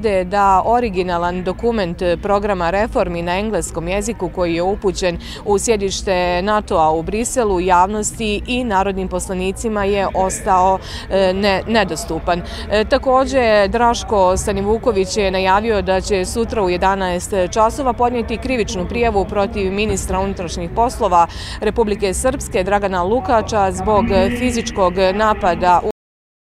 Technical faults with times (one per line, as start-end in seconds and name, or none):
25.91-26.55 cut-off end